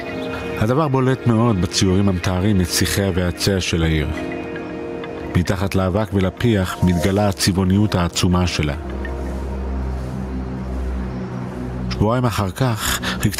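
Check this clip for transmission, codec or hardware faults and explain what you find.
Gain pumping runs through the whole clip: the gain ducks by roughly 15 dB under each loud sound, likely from excessive input gain driving a fast limiter.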